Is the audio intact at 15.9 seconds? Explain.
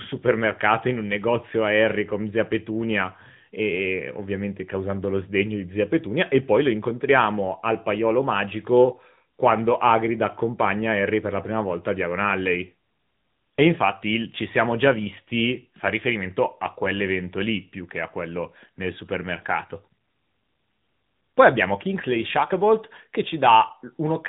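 No. At 15.9 s, as throughout the clip, the speech carries the AMR narrowband mobile codec's sound. Nothing above 3.8 kHz survives, and the voice has a plainly audible buzzy, synthetic edge. The codec rebuilds speech from a vocal tract model excited by a few pulses per 5 ms subframe, and the amount of damage fits a mid-rate mode of about 10 kbps. A simple low-pass filter would dull the top in the same way but leave the voice natural. The artificial buzz is what identifies the codec.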